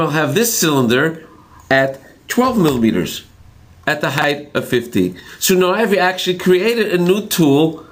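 From the start, there's gain pumping the whole way through, a swing of around 10 dB. The likely cause is input gain set far too high, with a fast limiter clamping down on every peak, so everything sounds squashed.

Then at 4.18 to 4.24 s there's a short jumbled stretch that sounds like chunks out of order. A piece about 20 ms long turns up late, roughly two chunks after where it belongs, so nothing's missing, but the order is wrong and there are hard joins.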